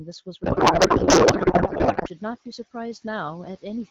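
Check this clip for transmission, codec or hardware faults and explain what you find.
Two faults stand out: a codec payload misread early on, and noise suppressor artifacts running the whole way through.

From 0.44 to 2.09 s there's a codec payload misread. The AMR frames were packed octet-aligned but read as bandwidth-efficient, so the decoder pulls fields from the wrong bit positions. The speech gets swapped for garbled noise and warble that barely tracks it.

The noise suppressor artifacts last the entire clip. It's pulling the steady background down by about 9 dB frame by frame, so the noise dips between phrases and comes back up under the speech. The room noise itself climbs about 10 dB around 1.5 s.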